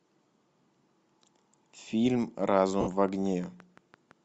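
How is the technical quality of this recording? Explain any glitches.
The recording has audible technical problems: a grainy coding texture throughout, a run of clicks in the second half, and a brief dropout.

Across the whole clip the speech has a breathy, grainy edge, with the top of the spectrum filled by noise rather than detail. This is likely Bluetooth LC3 compression at a modest rate, consistent with about 48 kbps. That noise fill distinguishes it from simple low-pass dulling.

From 2.57 to 4.12 s a train of clicks runs at a steady 5.85 per second, about ten in all, peaking roughly as loud as the speech. The clicks are regular, same-shaped ticks that continue through pauses. This points to external interference rather than codec damage.

From 2.81 to 2.88 s there are lost LE Audio frames: 60 ms, which fits six 10 ms frames. The decoder repeats the last spectrum with scrambled phase, so the speech smears into noise and fades instead of clicking or cutting to silence.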